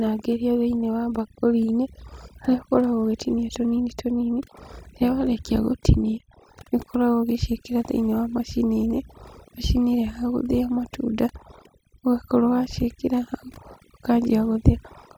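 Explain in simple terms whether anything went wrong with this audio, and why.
Overdone noise removal runs through the whole recording, from start to finish. A cleanup tool meant to strip out background noise was set far too strong. It kept shutting off slices of the sound it judged to be noise, and it caught the quieter parts of the speech along with them. That is why the background drops and breaks up into twinkling specks.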